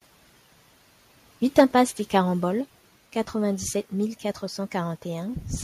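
From 1.58 to 1.81 s, the microphone's input gain was likely set too high, so the loudest peaks ran about 5 dB past the converter's ceiling and were sheared flat. This is microphone overload. Around 3 percent of the samples in that stretch are pinned at the limit, which puts a harsh, crackling grit on top of the speech and makes it sound brittle rather than cleanly loud.

At 1.6 s, inside that distorted peak, the call software likely reacted to the overload by cutting the device's input volume in a single step of about 2 dB. This is a microphone volume step-down. The speech and the background behind it drop together at once instead of fading, so there is a small dip in level right where the crackle sits.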